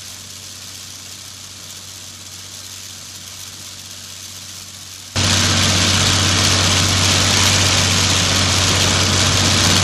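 From the start to 5.16 s, the summed sound collapses, dropping by about 19 dB and turning faint. Centred material nearly vanishes. The likely cause is one channel inverted, so content shared by both channels cancels in mono.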